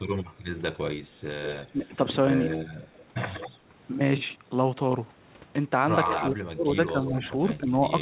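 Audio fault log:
0.29–0.44 s: background gated by the echo canceller. The room sound dips by about 7 dB for roughly 150 ms, then returns. The canceller turned the microphone down hard while the far-end loudspeaker was playing. It then released, so the background comes back.
1.43–1.71 s, 2.45–3.58 s, 6.07–6.24 s, 7.05–7.12 s: echo leak. A copy of the sound trails 186 ms behind. It sits about 10 dB below the main level in the first two stretches, about 5 dB below at 6.07 s, and about 15 dB below at 7.05 s. This is likely loudspeaker pickup that the far-end echo canceller failed to remove and sent back.
1.72–1.93 s, 6.15 s to the end: speech suppressed in double talk. The speech dips slightly, by around 5 dB, for roughly 150 ms. Later it sinks deeply, by around 30 dB, until the clip ends. Both sides likely spoke at once, and the canceller turned everything down.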